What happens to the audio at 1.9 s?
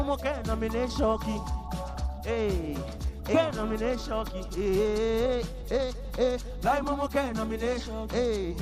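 Nothing goes wrong at 1.9 s; the audio carries on intact through that moment, with no dropout, glitch or other fault to be heard.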